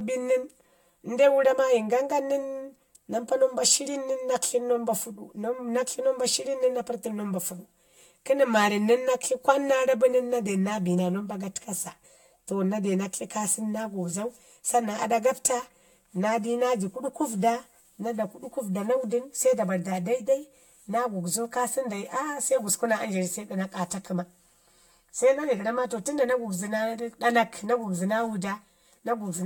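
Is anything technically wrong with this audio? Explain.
Yes. There is channel delay (comb filtering) throughout the whole speech clip. One channel runs late by roughly 5 ms, and when the two are summed to mono, the material common to both cancels at evenly spaced frequencies. The first notch sits near 100 Hz, with further notches following at regular intervals of about 200 Hz up the spectrum. The result is a hollow, phasey quality that stays fixed in place rather than sweeping.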